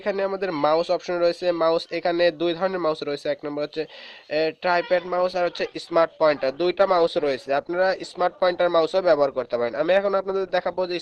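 At 4.93 s the adaptive stream switches to a lower bitrate and stays there to the end, likely because the connection slowed. The treble abruptly disappears above 12.1 kHz, with no gap, and codec artefacts rise, consistent with a step from around 64 to 16 kbit/s Opus.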